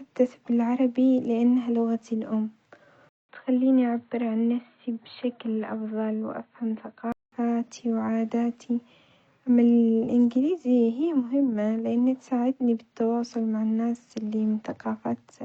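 At 3.09 s a 200 ms gap opens, and until 7.32 s the speech is duller, cut off above 4.3 kHz, a few dB quieter and over a new faint noise floor, likely an input switched to a poorer device, not a mere filter, which would keep the original noise and level.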